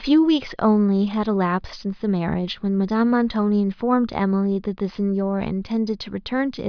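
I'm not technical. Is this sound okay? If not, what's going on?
Yes, the recording is in good technical shape, with no dropouts, glitches or other faults to be heard anywhere in it.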